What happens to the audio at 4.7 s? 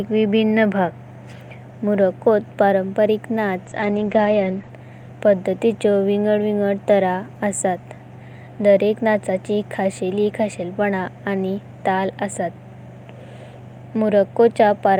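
At 4.7 s the clip is at the very end of a call bitrate drop running from 3.66 to 4.77 s. The connection's bandwidth estimate fell, so the encoder coded far more coarsely, consistent with a drop from around 48 to 12 kbps, and narrowed its audio band from 20 kHz to 8 kHz for about 1.04 s. The speech turns muffled. Unlike a fixed low-pass filter, the coarse texture and the band both recover once the bitrate returns.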